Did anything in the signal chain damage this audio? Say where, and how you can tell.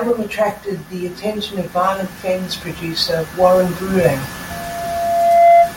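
Yes. Automatic gain rising in call processing: from 0.9 to 4.28 s the AGC raised gain by about 12 dB, so speech and background swell together.

Loudspeaker feedback squeal through the acoustic playback loop: from 4.50 s to the end, a 686 Hz tone builds over roughly a second to around 5 dB above the speech.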